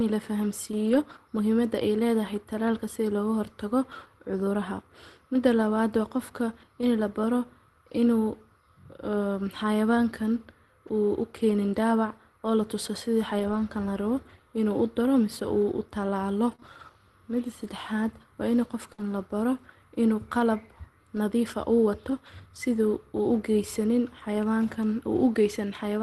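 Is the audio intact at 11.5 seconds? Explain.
No. Between 11.49 and 11.55 s, just after "uuu u" and before "daabac oo la tuso", the speech shows a lost packet rebuilt from error correction. About 40 ms of audio, which points to two lost Opus packets, was never received. The decoder filled the span with the low-bitrate redundant copy carried in the following packet, so there is no silence or dropout. That stretch sounds rougher and noisier than the surrounding speech.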